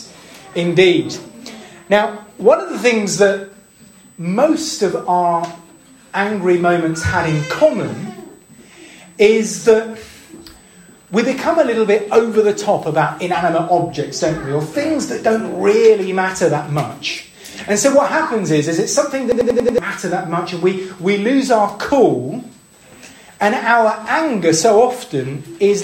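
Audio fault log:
throughout: USB whine. A thin, steady high tone at 8 kHz sits about 35 dB below the sound for the whole clip. Current drawn in 125-microsecond USB microframes leaks through power or ground into the audio path, giving this fixed-pitch whine.
19.32–19.78 s: system hang loop. One slice of about 93 ms repeats exactly five times, a machine-gun stutter at 10.8 Hz. The system froze while the hardware kept replaying its ring buffer, which fits a 4096-sample buffer, losing about half a second of audio.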